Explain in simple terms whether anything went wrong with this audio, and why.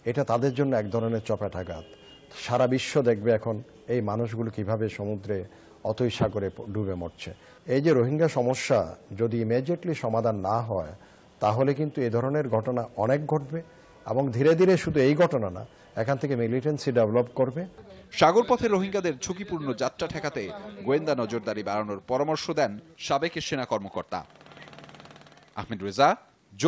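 Nothing went wrong here: the sound simply passed through a normal WebRTC call path, which is why everything above about 8 kHz is missing, and that is ordinary for a call rather than a fault.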